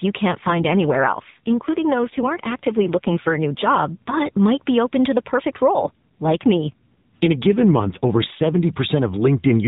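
Speech over a narrowband mobile link shows an AMR rate drop twice, from 0.40 to 4.23 s and 5.74 to 8.65 s, where the codec rate falls, consistent with a step from 12.2 to 5.9 kbps, and the voice turns buzzier and more synthetic without gaps.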